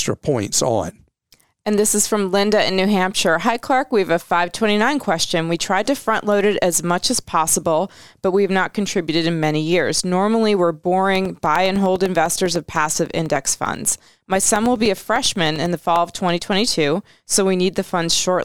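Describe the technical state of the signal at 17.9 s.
At 17.9 s the signal is intact, with no audible fault at that moment.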